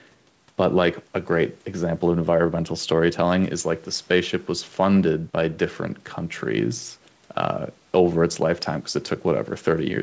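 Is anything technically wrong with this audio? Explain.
No, the speech is band-limited at 8 kHz as expected for a wideband call path, and nothing technically wrong stands out.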